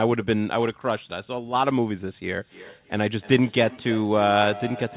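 From 2.4 s to the end, a feedback echo between two devices appears: a second device in the room replays the call, the first device's microphone picks that up again, and neither echo canceller removes it. The sound returns roughly every 300 ms, at its loudest about 16 dB below the speech.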